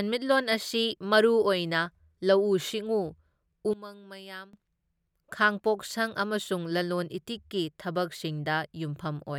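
From 3.73 to 4.53 s, the speech drops by about 18 dB to a faint copy. Centred sound and background nearly vanish. The likely cause is one channel inverted: reversed polarity cancels the shared signal when summed to mono.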